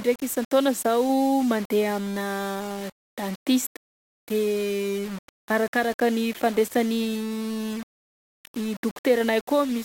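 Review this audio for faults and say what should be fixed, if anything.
Grainy, signal-following distortion runs through the whole speech clip, with quiet passages turning gritty. This is likely low bit depth without dither, consistent with roughly 5-bit rounding. Noise sits around 20 dB below the signal. To prevent it, keep a higher bit depth and apply dither before any reduction.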